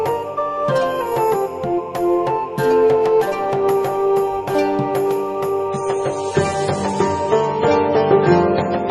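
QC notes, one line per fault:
5.70–8.91 s: adaptive stream at a lower bitrate. Treble suddenly stops above 10.4 kHz and swirly artefacts rise with no gap, consistent with a drop to 24 kbit/s MP3.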